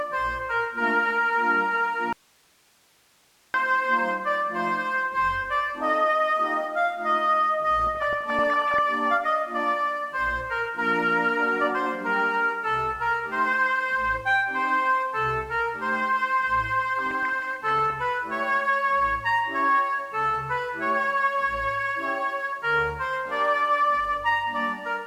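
The signal path likely lost its source for a moment while the chain after the break stayed open, causing an audio dropout to a faint residue from 2.13 to 3.54 s. The sound cuts off abruptly for about 1.4 s, leaving only a bed of hiss roughly 35 dB below the programme level. Then it returns just as suddenly. The hard edges at both ends distinguish it from a pause or a fade.

Weak DAB reception lets bit errors slip past the error correction into the MP2 audio data, producing DAB burbling from 7.80 to 8.79 s and again from 16.99 to 17.90 s. Corrupted samples put short blips of noise into single sub-bands, and corrupted scale factors make individual sub-bands jump in level for up to a frame, so each stretch of about a second is disturbed over the programme. The density suggests an error rate of well under one percent spread across many consecutive frames.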